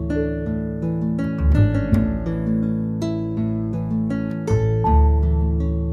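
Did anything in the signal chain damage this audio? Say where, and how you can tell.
No, nothing in the audio stood out on listening as a sign of damage from any stage of the signal chain.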